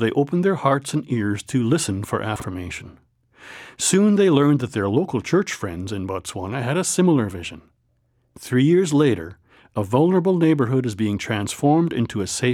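At about 2.36 to 2.44 s there's a chunks-out-of-order glitch: one 40 ms chunk turns up a chunk late and plays after the one meant to follow it. Nothing's missing, but the swap leaves hard joins, so you get a quick jumbled moment.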